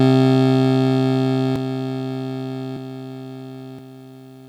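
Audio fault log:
1.56 s, 2.77 s and 3.79 s: compressed frames skipped. The music jumps ahead by around 0.7 s each time, as whole frames never get decoded, which fits frames of about 93 ms.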